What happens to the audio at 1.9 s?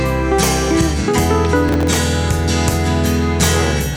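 At 1.9 s the audio is inside a burst of processor overload crackle running from 1.68 to 1.96 s. The processor falls behind on very short buffers, around a millisecond and a half each, and misses a dozen or more deadlines over that stretch. Each miss replays a scrap of old audio with hard edges, so the sound picks up a gritty, tearing crackle that stops once the load eases.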